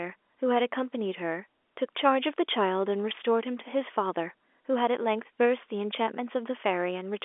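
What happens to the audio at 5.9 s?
Nothing goes wrong at 5.9 s: the speech is intact there, carried over ordinary G.711 telephone coding with its narrow line band and nothing above about 3.7 kHz.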